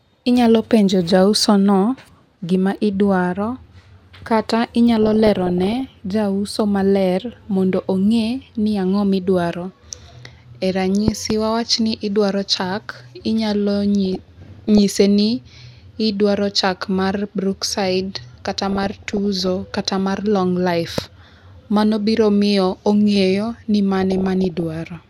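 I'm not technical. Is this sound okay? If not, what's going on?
No. Four times the speech turns into a garbled, burbling sound for under a second: 5.03 to 5.81 s (just before "jauso maler mondo ong'e"), 14.05 to 14.79 s, 18.67 to 19.48 s (between "chak mar brookside kata" and "kata mar long life"), and 23.96 to 24.63 s (after "biro miyo ong'eyo ni"). This is DAB burbling, where weak digital radio reception lets damaged data slip through and garble parts of the sound.

There are also sharp loud pops on top of the speech, a quick double pop from 11.08 to 11.33 s and a single one at 20.98 to 21.01 s, likely from a sudden electrical jolt such as a plug, switch or static.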